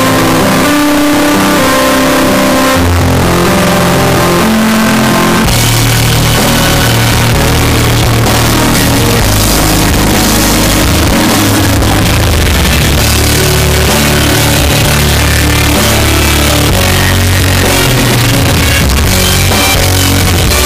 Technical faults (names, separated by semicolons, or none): float read as integer